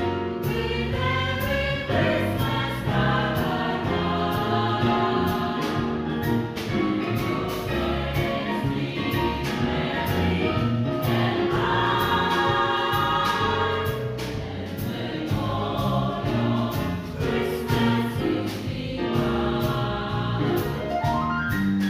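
Nothing here calls for comment, since no technical fault turns up anywhere in the clip.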